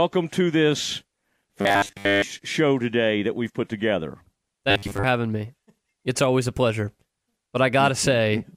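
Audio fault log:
1.61–2.25 s (after "to this", before "show today that we've") and 4.71–5.04 s (after "that we've put together", before "having me"): robotic sound from repeated short buffers. The speech becomes a rigid metallic buzz at 100 Hz. That fits most of each span being filled by a repeated 10 ms chunk, likely because fresh audio arrived too slowly. Unlike a dropout or a syllable stutter, there is no gap or audible restart, only a fixed-rate buzz that still loosely tracks the words.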